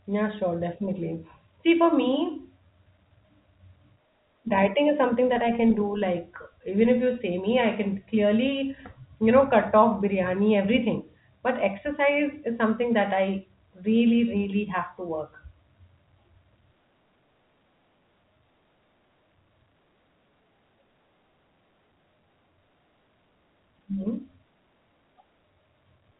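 No technical faults are present in the speech, which carries the expected G.711 telephone coding band limit, with nothing above 3.8 kHz.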